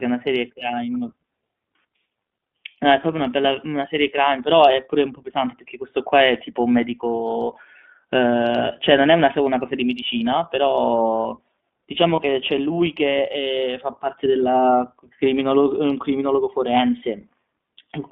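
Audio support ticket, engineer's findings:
Narrowband, slightly rough and synthetic sound throughout, band limited to roughly 200 Hz to 3.6 kHz. iLBC codec damage plainly audible, consistent with 15.2 kbps mode using independently coded 20 ms frames.

Brief held, buzzy vowel-like smear at 12.16 to 12.20 s, recovering immediately. Lost iLBC frames: the decoder repeated the last pitch cycle with noise, which fits a single dropped 20 ms frame.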